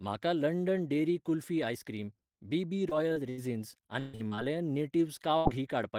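At 2.89 to 2.93 s and 3.13 to 3.18 s, short concealed packet loss leaves brief smears: about 20 ms of speech was lost each time and patched by continuing the last sound. At 3.30 to 3.39 s, a burst of packet loss drops about 80 ms. The receiver extends and fades the last sound into a held buzz or hiss, then resumes further on. From 3.99 to 4.39 s, repeated packet loss gives choppy speech with pieces missing. Four gaps, the longest 137 ms, leave about 60 percent of the stretch filled in. A second 80 ms burst at 5.37 to 5.47 s repeats the fading-then-jump effect.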